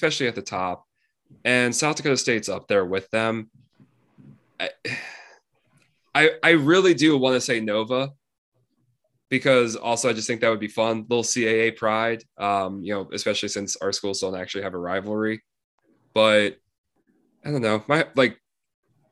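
Nothing goes wrong anywhere in this speech recording, so there's no fault to point to at any moment.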